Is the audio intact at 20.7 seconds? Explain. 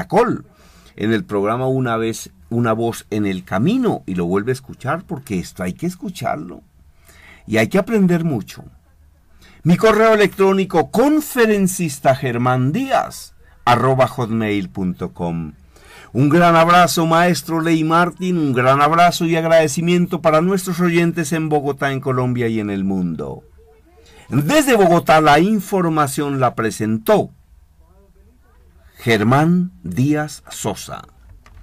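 Yes, the audio is intact at 20.7 seconds, with no fault audible at that moment.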